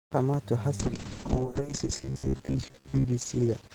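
At 0.85 s there's a call bitrate drop, and it lasts to the end. The bandwidth estimate fell, so the encoder went from 32 kbps down to 7 kbps and had to code the speech far more coarsely. At that rate it also throws away the top end, so the sound goes muffled and a bit watery. It sits at its worst for about 1.17 s and never climbs back before the clip ends.

From 1.98 s to 3.06 s, while the bitrate is still low, the speech turns into a stiff metallic buzz at about 67 Hz that still loosely tracks the talking. That's most likely robotic sound from repeated short buffers. Fresh audio wasn't arriving often enough, so the software kept looping the last chunk of roughly 15 ms and skipped the real audio. That looping imposes the fixed pitch, and about half the stretch is filled that way.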